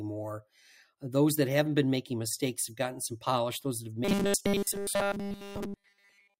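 From 4.05 s to the end at 6.40 s the speech collapses into robotic sound from repeated short buffers: a rigid, metallic 200 Hz buzz. Fresh audio is likely arriving too slowly, so a roughly 5 ms snippet loops almost continuously while the real signal gets skipped.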